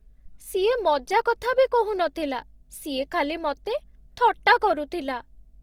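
A steady mains hum runs under the speech from start to finish, a low tone at 50 Hz with a few low harmonics above it. It sits roughly 30 dB below the speech. A ground loop or a nearby transformer has let the power line couple into the signal path, and the hum does not change with the speech.

Across the whole clip the speech also sounds rough and grainy, with a noisy texture. The damage is plainly audible, yet the high end stays open, with no obvious narrowing of bandwidth. This points to Opus compression in its music (CELT) mode. Band energies are preserved, but starved bands have been filled with folded or noise content. The likely cause is a low bitrate, and the sound fits roughly 24 kbps.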